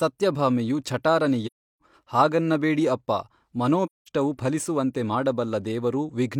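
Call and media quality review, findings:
AAC frame loss with muting at 1.46–1.82 s and 3.85–4.09 s: decoder zeroes lost-frame spectra; overlapping windows fade edges, so soft holes, unlike hard-cut packet dropouts.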